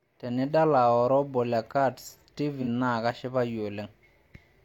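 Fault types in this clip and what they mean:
AAC frame loss with concealment: at about 2.61 to 2.67 s, roughly 43 ms of speech is missing, which fits a single lost frame. The decoder patches it from the preceding spectrum, so there is a brief smeared, phasey patch rather than the clean silent gap of a dropout.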